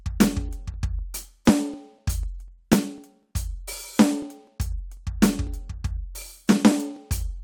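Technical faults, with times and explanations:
0.24–7.21 s, periodic USB or driver dropouts: around thirty ticks fall every 0.249 s, about four per second, across the music. Each time, something blocks the audio path and about a millisecond of samples is skipped rather than filled with silence, so the waveform jumps and clicks. The strict spacing sets this apart from random buffer underruns, which come at irregular times, and the brief, skipped losses avoid the audible gaps that silence-filled dropouts would leave.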